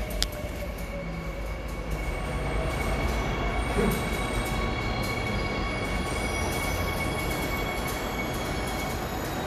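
A recording of everyday sounds with nothing technically wrong with it.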